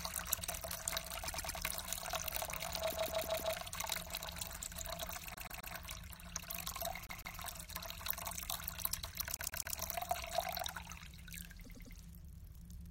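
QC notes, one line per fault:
1.27–1.58 s, repeated frames: a 104.5 ms block of sound plays four times in a row, a stutter that adds 313.5 ms.
2.91–3.54 s, repeated frames: a 156.7 ms block repeats four extra times, a stutter adding 626.9 ms.
5.34–5.74 s, repeated frames: a 130.6 ms block plays four times, a stutter that lengthens the audio by 391.8 ms.
7.07–7.38 s, repeated frames: a 156.7 ms block plays three times, a stutter adding 313.5 ms to the running time.
9.37–9.76 s, repeated frames: a 130.6 ms block plays four times, a stutter that adds 391.8 ms.
11.64–11.95 s, repeated frames: a 104.5 ms block plays four times as the decoder replays identical frames, a stutter adding 313.5 ms.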